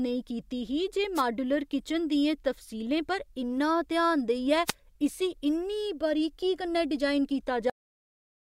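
At 1.15 to 1.22 s and again at 4.66 to 4.73 s, a wireless microphone noise hit brings a brief swish of static, where the FM radio signal faded and receiver noise rose. At 7.70 s there is a cut-off end: the speech stops mid-sound and falls straight to digital silence with no decay, unlike a fade-out, because the final buffers never played.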